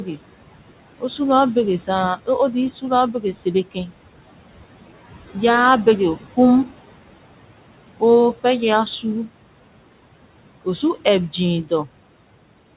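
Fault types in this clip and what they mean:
Noise suppressor artifacts: the suppressor pulls steady background down by about 18 dB, so the room noise dips between phrases and swells back under speech.
Speech cut by the noise suppressor: around 3.72 to 3.91 s it mistakes a soft bit of speech for noise, dropping it by up to about 15 dB, so it sounds swallowed.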